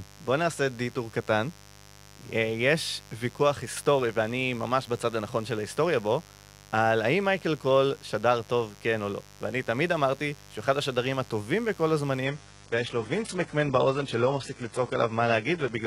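Mains buzz runs through the whole speech clip, a steady raspy hum on a 50 Hz base sitting roughly 25 dB below the speech. Sharp switching spikes twice per mains cycle leak into the signal path and spread harmonics well up into the kilohertz range.

From 12.25 s to the end, the adaptive stream drops to a lower bitrate. Treble vanishes above 11.1 kHz, and the speech turns thinner as codec artefacts rise, with no gap at the switch. This fits a change from 96 kbit/s AAC to a 12 kbit/s HE-AAC version.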